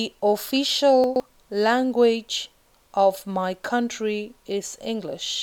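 Around 1.04 to 1.2 s there's a stretch of chunks out of order: one 40 ms chunk shows up three chunks late, after the audio meant to follow it. Nothing's missing, but that short span sounds jumbled.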